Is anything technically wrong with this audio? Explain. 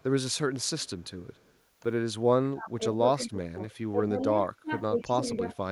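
Yes. Two kinds of fault run through this speech clip.

Echo leak appears from 0.0 to 1.54 s, again briefly at 3.23 to 3.29 s and 3.71 to 3.75 s, and from 5.0 to 5.39 s. A faint delayed copy of the speech trails the original by 130 ms. It sits about 35 dB below the speech in the first and third instances and about 25 dB below in the second and fourth. This is likely residual loudspeaker pickup that the far end's echo canceller failed to remove and sent back.

Speech suppressed in double talk occurs from 2.51 to 3.6 s and from 3.92 to 5.46 s. The speech dips in level while the other side is talking, by roughly 25 dB at worst in the first stretch and roughly 15 dB in the second. The dips total well over half a second in each stretch. The likely cause is the echo canceller mistaking the local talker for echo during overlapping speech and attenuating it along with the echo.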